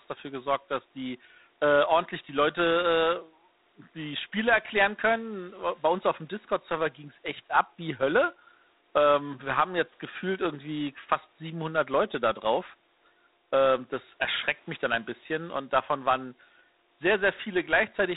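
A harsh, rasping hiss rides on the speech from start to finish, swelling and fading with its level, and nothing above about 3.9 kHz comes through. This is G.726 ADPCM damage at a coarse setting, consistent with 24 kbit/s, where too few bits per sample describe each difference from the predicted waveform. The faint room noise, about 37 dB below the speech, sits underneath.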